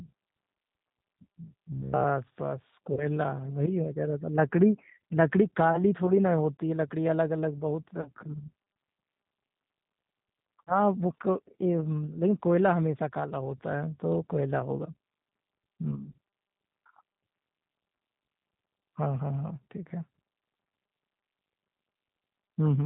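A speech recording that sounds band-limited, rough and slightly synthetic throughout, with nothing above 4 kHz, which is plainly audible G.729 codec damage at 8 kbit/s. From 1.72 to 2.05 s the speech becomes a rigid, metallic buzz at about 67 Hz, likely robotic sound from repeated short buffers of roughly 15 ms, with most of the audio replaced by repeats. At 2.94 to 3.07 s, 8.01 to 8.10 s and 10.65 to 10.73 s, the speech briefly smears into a buzzy, fading tone and stays weak afterward. This is VoIP packet loss concealed by the speech codec, covering about 30, 40 and 30 ms of missing audio.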